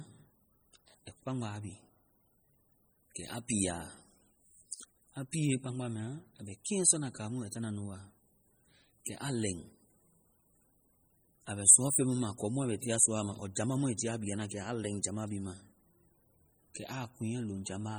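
MP3 compression runs through the whole clip, from start to finish, and heavy damage is audible on the speech throughout. The likely cause is an encoder starved of bits, which fits a low bitrate of around 32 kbps. With so little to spend, it zeroes the weaker frequency lines, and these flicker on and off between frames. The result is a watery, swirling texture, with metallic chirps on s sounds and smeared attacks. Nothing is present above 21 kHz.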